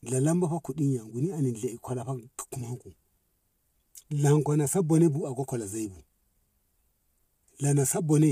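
Throughout, the speech was likely coded with low-delay AAC compression at a rate that fits 32 kbps, leaving plainly audible grainy roughness and nothing above 15.6 kHz.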